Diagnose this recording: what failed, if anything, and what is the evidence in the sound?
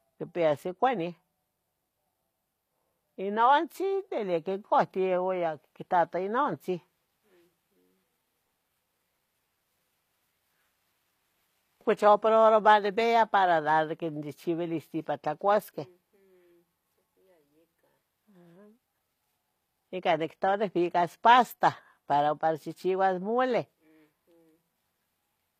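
The codec stage is where this went wrong. Right through the speech the treble sounds synthetic rather than recorded, with plainly audible damage and nothing above 14.9 kHz. That's likely HE-AAC compression, consistent with a low bitrate around 24 kbps: the top band is rebuilt from copied lower bands, so its harmonics don't line up with the real ones.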